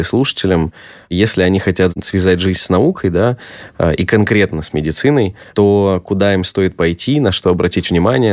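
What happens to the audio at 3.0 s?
Nothing goes wrong at 3.0 s: the speech there plays through intact, with no dropout, click, distortion or other audible fault.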